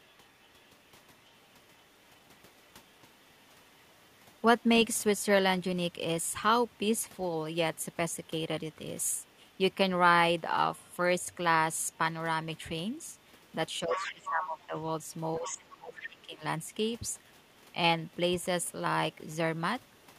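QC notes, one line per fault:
0–4.63 s, 6.74–6.78 s and 7.76–9.74 s, other side's voice leaking through: A faint second voice sits under the talker, roughly 35 to 40 dB down. It is barely audible. The likely cause is loudspeaker sound reaching the microphone and escaping the echo canceller.
10.8–18.65 s, other side's voice leaking through: The second voice turns loud, only around 10 dB below the talker. It runs for nearly eight seconds. The canceller likely failed to remove the loudspeaker echo from the microphone.
13.84–16.43 s, speech suppressed in double talk: Both voices overlap here, and the talker's speech dips in pieces, falling by as much as about 20 dB. The cuts add up to around a second and a half. The canceller likely could not separate talker from echo, so it turned both down.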